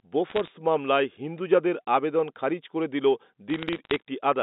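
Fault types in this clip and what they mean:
Bit errors on a digital phone line: individual bits in the 8-bit G.711 samples arrived flipped, and each flip corrupts exactly one sample. When the sign or a high-order bit is hit, that sample jumps far from its neighbours and produces a sharp tick. Two bursts of crackle, at 0.30 to 0.48 s and 3.5 to 4.0 s, sit over unchanged phone-band speech, and their density points to roughly a few errors per thousand bits.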